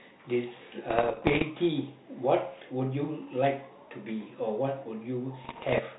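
Bit errors on an ADPCM link hit from 0.88 to 1.43 s and 5.44 to 5.79 s. Around one percent of bits flip, jolting the decoder into pops and rough, level-jumping bursts.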